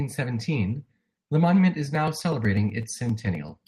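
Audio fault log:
1.95–3.68 s: periodic USB or driver dropouts. Regular ticks every 0.124 s while sound plays, where a background task blocks the driver and short slices are skipped.
3.04–3.08 s: short stall from a late packet. The sound is held about 16 ms with a faint buzz or dip; the jitter buffer ran empty, but nothing was lost.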